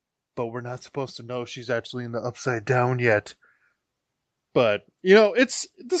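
From 0.93 s to 2.96 s the automatic gain rises: the gain control judged the input too quiet and raised it by about 8 dB over two seconds, so the speech and background swell together. The audio above 8 kHz is absent throughout, consistent with the call codec's bandwidth limit.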